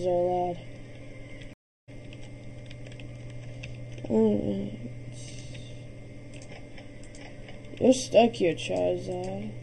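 From the start to the end the audio sounds hollow and phasey, with a thin, scooped quality in the upper midrange that never changes. That is channel delay (comb filtering): one channel runs late by roughly 0.4 ms, and when the two are summed to mono, the content they share cancels at evenly spaced frequencies. The first deep notch falls at around 1.5 kHz, with further notches repeating above it.

At 1.53 s the sound cuts out completely for about 0.34 s. At 1.89 s it comes back at a later point, with roughly 0.4 s of material skipped. This is a stream reconnect: the connection dropped, the player went silent while it re-established the link, and a fresh decoder picked the stream up mid-flow. The audio that played during the outage was never heard.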